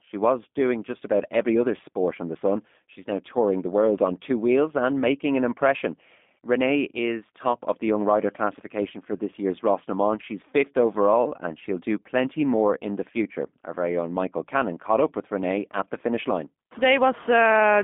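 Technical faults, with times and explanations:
Throughout, G.729 codec: speech rebuilt from a vocal-tract model sounds rough and synthetic, band-limited to about 200 Hz to 3.6 kHz, consistent with an 8 kbit/s G.729A link.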